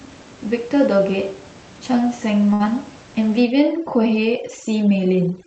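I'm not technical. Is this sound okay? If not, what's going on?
No, there are two problems. A burst of packet loss hits at 2.53 to 2.65 s. Some of the audio never arrived in time, so the playback stretched out the last bit it had for a little over 60 ms and let it fade, which gives a brief held or smeared sound. It then skipped ahead, so about 60 ms of the real recording is simply missing, and the sound picks up further on when it comes back.

From 3.41 s to the end there is overdone noise removal. A cleanup tool meant to strip out background noise was set far too strong. In the first part, the faint room background is still audible. After 3.41 s the tool shuts off whole slices of the sound whenever they seem close to that noise level, and quieter parts of the voice get cut along with it. The background drops and breaks up into small twinkling specks.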